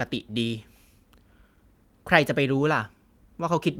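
Speech recording with no audible technical problems.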